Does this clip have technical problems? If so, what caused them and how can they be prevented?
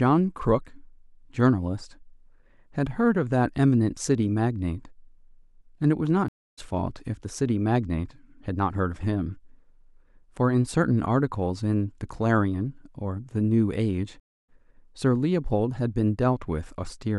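Yes. Two stream reconnects occur, at 6.28–6.59 s and 14.20–14.50 s: the connection dropped, about 230 ms of silence followed, and a fresh decoder resumed the speech roughly 150 ms later, skipping material. The waveform shows a flat gap ending in a restart that fades in, and the spectrogram shows a blank vertical band. A larger client buffer with seamless reconnection that resumes at the exact byte offset would prevent this.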